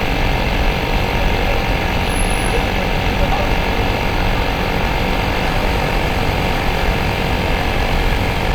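From 5.39 s until the end at 8.54 s, a steady, raspy buzz sits under the sound, roughly 15 dB below it. This is mains buzz at 50 Hz. Sharp switching spikes, of the kind a dimmer, a rectifier or a gap in shielding lets into the signal, arrive twice in each mains cycle. Their harmonics stack up from 50 Hz into the kilohertz range, so the hum carries a gritty, edgy top instead of a pure low tone.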